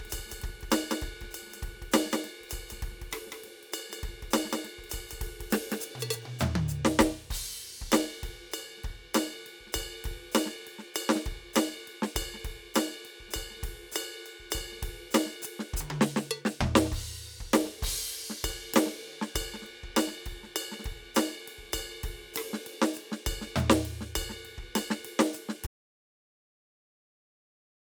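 From the very start until 6.16 s, the music has a doubled audio track: a clean copy trails roughly a fifth of a second behind, a few dB quieter, likely from a second, slower capture path. At 25.67 s there's an abrupt audio dropout to silence that runs to the end, dead silence with no room tone, most likely a lost input.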